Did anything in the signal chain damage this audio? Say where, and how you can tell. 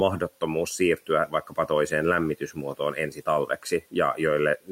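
Yes. Speech cut by the noise suppressor in call processing, at 1.27–1.7 s and 2.4–3.27 s: quiet stretches drop about 11 dB with the room noise, showing as faded spectrogram energy and pinched waveform.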